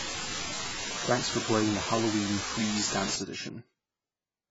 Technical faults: AAC compression; unreliable data bit

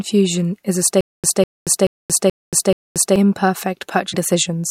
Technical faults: stutter with silent gaps; broken MP3 bit reservoir

